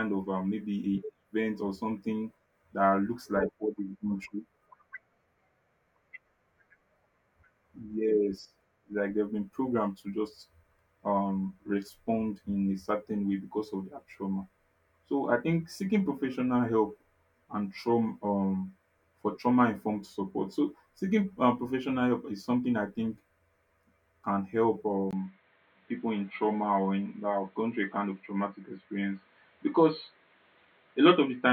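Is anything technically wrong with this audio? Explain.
Yes. At 25.11 s the sound turns dull and boxy. Nothing above 4.3 kHz survives, with a 20 ms gap and faint new noise. Likely an input switched to a poorer device.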